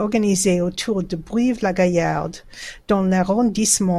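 Nothing in the recording stood out as a technical fault on listening.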